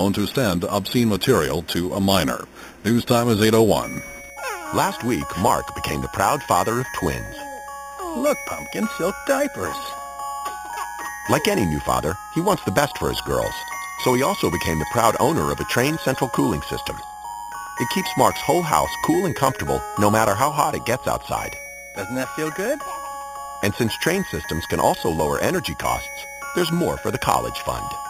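Imaging from sample-and-hold upsampling runs through the whole clip. The audio sounds as if it began at 8 kHz and was raised to 48 kHz by repeating each sample, with no smoothing filter. That leaves mirror copies of the spectrum above the original band. The strongest copy sits between 4 and 8 kHz, about 14 dB below the wanted sound. It is heard as a bright metallic fizz that rises and falls with the sound. It moves against the pitch.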